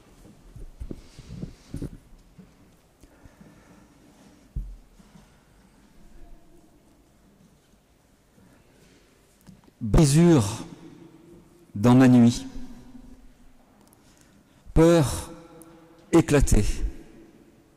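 Dropped buffers (overrun) at 1.88, 9.98, 12.37, 13.14 and 14.76 s jump the audio ahead by roughly a tenth of a second each (longer at 13.14 s), likely from samples being overwritten before capture.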